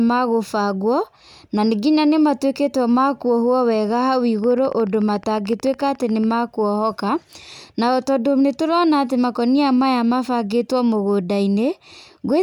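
A rapid, even ticking runs over the speech from 4.44 s to 6.32 s, a train of clicks arriving at a steady 13.9 per second, around thirty in all, each with much the same sharp shape and roughly as loud as the speech itself. The regular spacing of identical pulses most likely points to interference from nearby equipment or a faulty connection or power supply.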